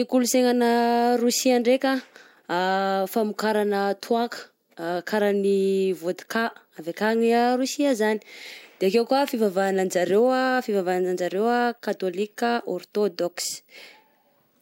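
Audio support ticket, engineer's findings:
No technical faults found.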